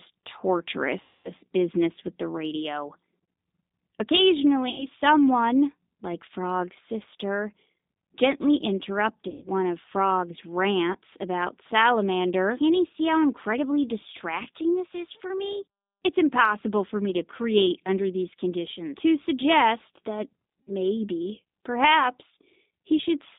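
The whole clip runs through a G.729 codec at 8 kbit/s. The speech rides a narrow 200 Hz to 3.7 kHz line band and is rebuilt from a vocal tract model and a few pulses per frame, which leaves it plainly rough and a bit synthetic throughout.

On top of that, there are five bursts of VoIP packet loss concealed by the speech codec. The decoder fills each gap by stretching its last pitch and filter into a fading smear, and the speech sounds weak for a moment after. The first, at 1.01 to 1.31 s, is about 240 ms of lost audio right before "business with the radio". Next is 4.70 to 4.86 s, about 80 ms, before "someone like". Then 9.28 to 9.47 s covers about 140 ms, followed by a brief 20 ms dropout at 10.93 s. The last comes at 20.61 to 20.72 s, about 60 ms, just after "suggest that".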